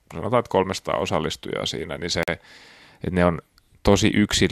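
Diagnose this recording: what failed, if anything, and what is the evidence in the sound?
Speech cuts to hard-edged silence from 2.23 to 2.28 s: a gap between stream segments in playback, where segment timestamps leave 46 ms unfilled.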